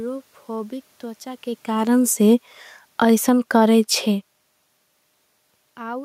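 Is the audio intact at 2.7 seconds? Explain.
No. At 2.7 s the sound is partway through an automatic gain falling, running from 1.68 to 3.53 s, just after "त्रचा के" and ending before "करे छे". The AGC decided the input was too hot, or its background noise too strong, and eased its gain down by about 7 dB, so the speech and the room noise sink together.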